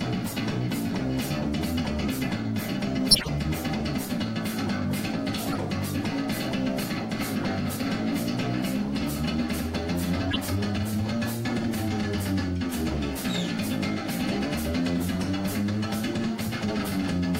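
Corrupt frame decoded faults occur at 3.11 to 3.29 s, 5.45 to 5.58 s, 10.31 to 10.41 s and 14.31 to 14.38 s. Each time, damaged bits in a run of compressed frames were decoded as if valid, so misread gains and codes put energy at the wrong frequencies, giving a brief chirp, squeak, blip or noise burst. The first and longest burst is the loudest, and the rest sit well below it.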